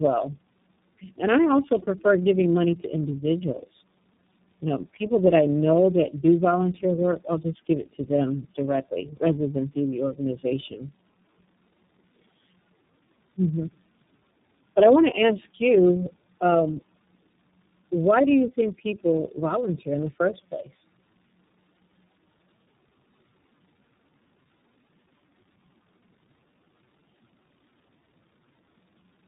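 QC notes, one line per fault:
throughout: tandem speech coding. The speech sounds rough, muffled and warbly, with nothing above 3.8 kHz. That fits three speech codecs in a row, such as G.729A, G.723.1 and iLBC, each re-coding the last one's already damaged output, so the artefacts stack up.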